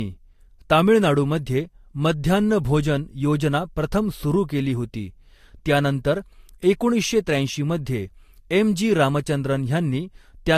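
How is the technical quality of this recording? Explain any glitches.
The recording has audible lossy-coding damage throughout its speech, consistent with transcoding between lossy codecs. Nothing is heard above 14.2 kHz. Two sets of artefacts overlap: the artefacts of one codec heard together with those of another. The likely cause is re-encoding, with a Vorbis stage at roughly 44 kbit/s applied after a roughly 64 kbit/s AAC-LC pass. A single low-bitrate encode would show just one consistent artefact character, not two mixed together.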